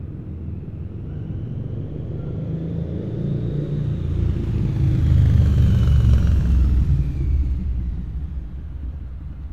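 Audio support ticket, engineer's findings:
Listened through the full recording of sounds; nothing stood out, no findings to log.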